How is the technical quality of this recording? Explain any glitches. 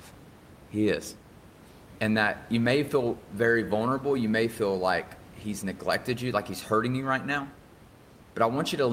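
No glitches or faults heard.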